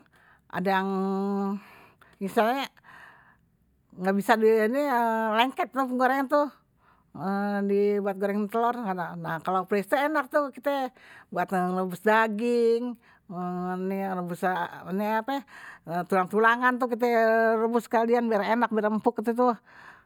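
The speech recording has no audible technical faults anywhere along its signal path.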